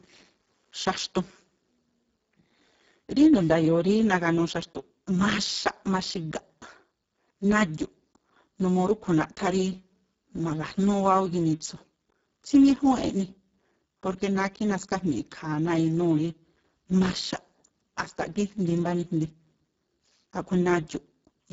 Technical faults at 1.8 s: Speex codec

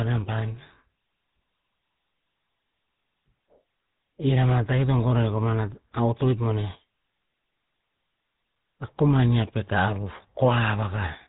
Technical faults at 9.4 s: GSM full-rate codec

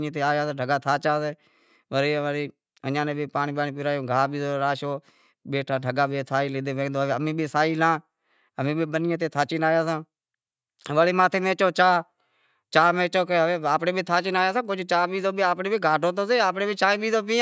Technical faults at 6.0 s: none

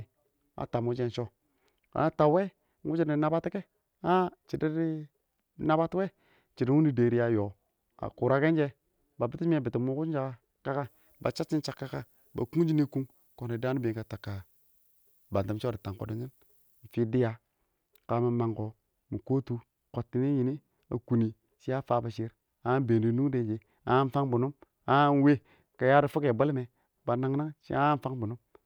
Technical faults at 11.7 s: pre-emphasis left on

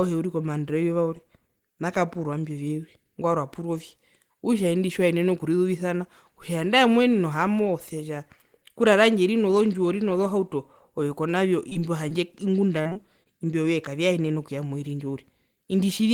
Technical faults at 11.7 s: short concealed packet loss

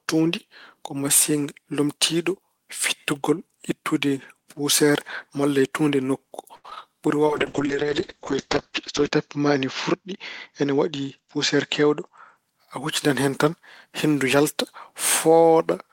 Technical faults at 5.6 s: none

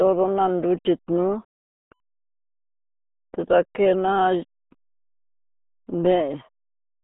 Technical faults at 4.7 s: RealAudio 14.4 codec

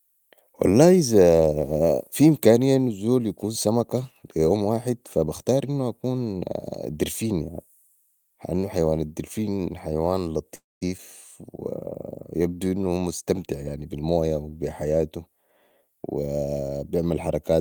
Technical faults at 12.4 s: jitter buffer slow-down

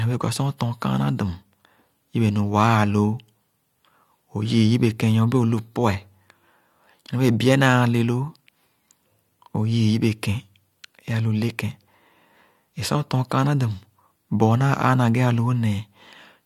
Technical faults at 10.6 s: none

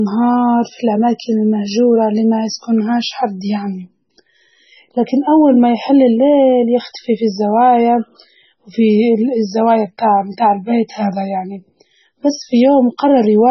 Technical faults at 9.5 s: MP3 compression

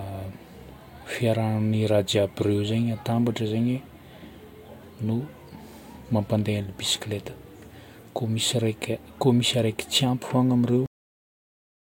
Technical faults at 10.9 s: cut-off end

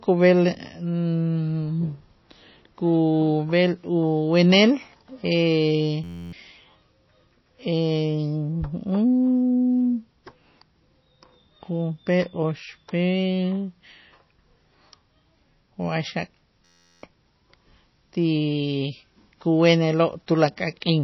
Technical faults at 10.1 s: MP3 compression

